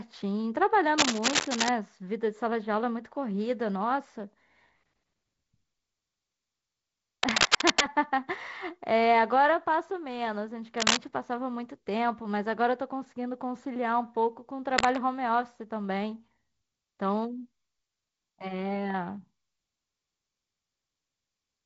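From 0.98 to 1.69 s, 7.23 to 7.82 s, 10.77 to 10.97 s and 14.78 to 15.03 s, bursts of scratchy, rustling cable scratch noise sit a few dB above the speech, likely from a worn connector being jostled.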